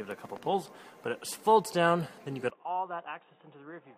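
At 2.5 s, sound above 3.8 kHz vanishes as level drops about 10 dB and new noise enters, likely an input switched to a poorer device.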